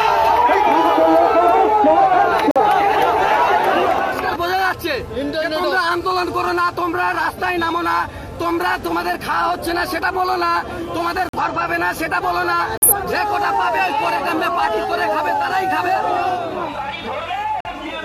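Corrupt frame muted at 2.51, 11.29, 12.77 and 17.60 s. Damaged compressed frames were rejected and replaced by silence. Each gap starts abruptly, lasts about 0.1 s, and the timing holds.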